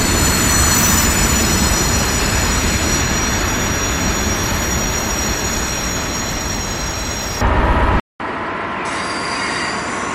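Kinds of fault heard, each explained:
Input switched to a poorer device: at 8.0 s there's a 200 ms gap, then the sound comes back roughly 10 dB quieter and duller, cut off above 10.3 kHz, with fresh background noise around 35 dB down, likely a jump to a lesser microphone.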